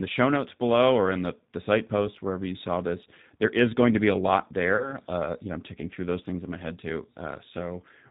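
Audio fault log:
Throughout, G.729 codec: speech rebuilt from a vocal tract filter and sparse pulses, with nothing above 4 kHz, sounds plainly rough and synthetic, consistent with 8 kbit/s.
4.76–4.97 s, VoIP packet loss concealed by the speech codec: after "to be a lot", 30 ms of audio is lost, fitting a single packet. The decoder stretches the last sound into a fading buzzy tone or coloured noise, and the voice stays weak or distorted until its frames rebuild.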